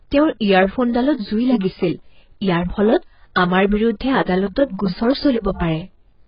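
Low bit depth without dither runs throughout the speech: quiet passages turn gritty, with error noise roughly 50 dB below the signal, likely from truncation to about 10 bits.

AAC compression also runs throughout, with heavy codec damage: nothing survives above 5.2 kHz, leaving the speech dull, likely from AAC-LC coding at around 12 kbps.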